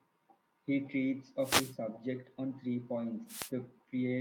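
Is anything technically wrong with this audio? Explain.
Yes. Two wireless microphone noise hits occur in this speech, from 1.40 to 1.76 s, just before "subject on three", and from 3.27 to 3.51 s, right after it. Each time the FM radio link fades as reflected paths cancel, so receiver noise surges into a brief swish of static over the voice.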